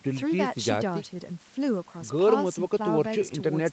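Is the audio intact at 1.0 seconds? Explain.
Yes, at 1.0 seconds the audio is intact, with no dropout, glitch or other fault at that moment.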